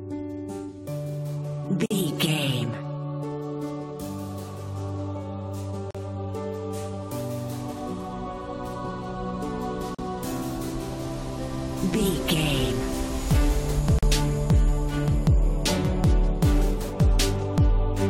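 Brief silent dropouts with smeared edges cut into the sound at 1.86, 5.91, 9.95 and 13.99 s, roughly every 4 s, each 40 to 48 ms: a gap at a join of encoded pieces, where encoder start delay and end padding were left untrimmed.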